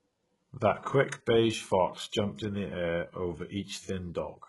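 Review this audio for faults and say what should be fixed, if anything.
HE-AAC compression, likely, throughout the speech. Treble above the coded band is rebuilt from copied lower bands, so s sounds turn gritty and metallic. Nothing reaches past 11.5 kHz. The heavy damage fits a bitrate near 12 kbps. Encode at a higher bitrate or with plain AAC to keep the original treble.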